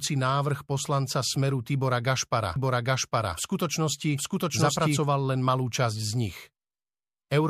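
From 2.56 to 4.98 s there's a doubled audio track. The speech plays twice, a second equally loud copy trailing by roughly 0.7 s, dry and full-band. It likely comes from a slower duplicate capture path, and it starts abruptly right before "len malú časť".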